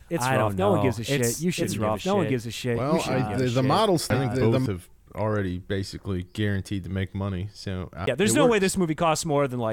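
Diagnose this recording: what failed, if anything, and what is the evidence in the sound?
From the start until 4.66 s, just before "have already basically", a second full-band copy of the speech runs about a second and a half behind at roughly equal level, then cuts off abruptly. This doubled audio track likely comes from a slower second capture path or an edit holding two offset copies.

At 4.1 s and 8.06 s there is a brief tick, with very short silences of a few milliseconds and about 15 ms, and the speech resumes from a different point. These are CD skips at the playback stage: the laser jumped tracks and the player continued elsewhere on the disc.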